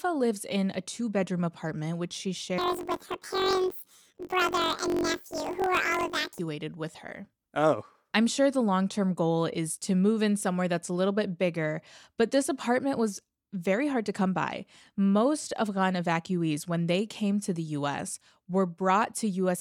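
From 2.58 to 6.40 s, after "bedroom apartment which she", planar audio gets read as interleaved. Each 21.8 ms block replays as left-then-right at double speed, giving an octave-up robotic buzz at about 46 Hz until "with her".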